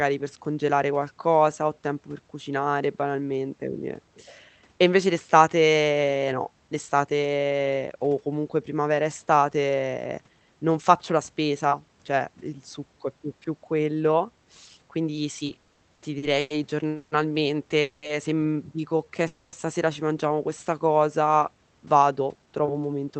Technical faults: repeated stalls (stutter); call audio freeze; jitter buffer slow-down; jitter buffer speed-up

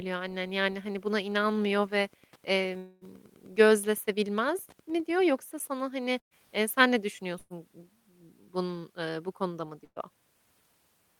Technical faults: Wi-Fi interference; long network dropout; burst of packet loss

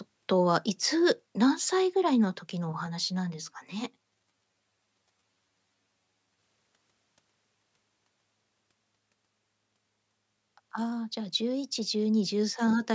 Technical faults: channel delay (comb filtering)

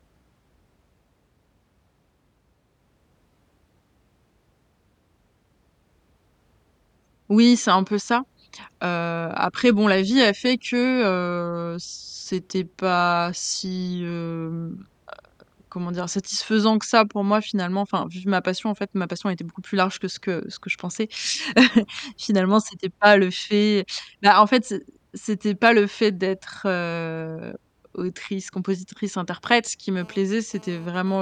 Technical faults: channel delay (comb filtering); GSM phone buzz

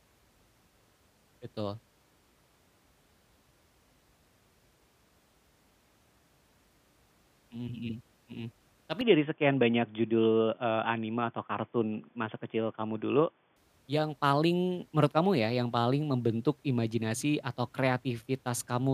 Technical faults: input switched to a poorer device

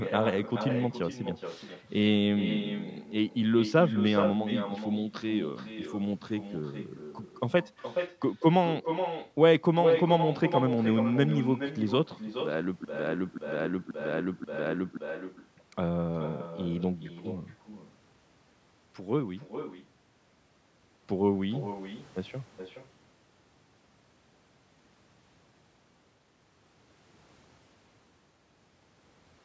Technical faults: echo with no canceller; broken-record loop

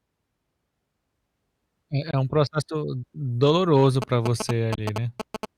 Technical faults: Bluetooth dropout; GSM signalling bursts

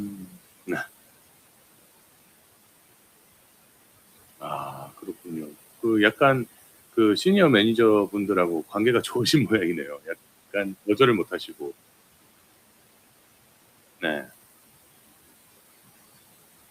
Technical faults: noise suppressor artifacts; speech cut by the noise suppressor

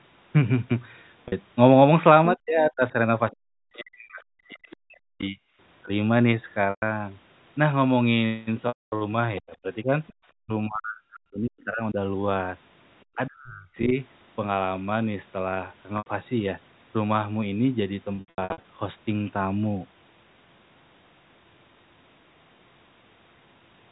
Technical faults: packet loss with pitch repetition; speech suppressed in double talk; other side's voice leaking through

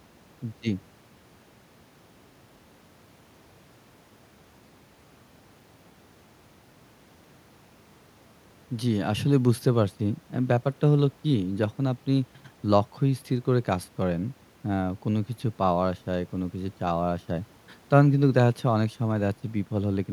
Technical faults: none

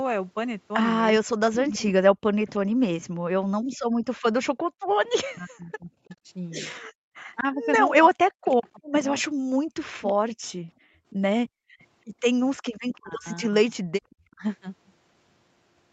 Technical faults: speech suppressed in double talk; echo leak; background gated by the echo canceller

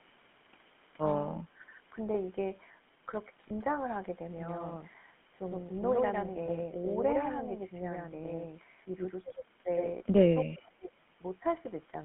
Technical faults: GSM full-rate codec; speech suppressed in double talk; lost GSM frames; echo leak

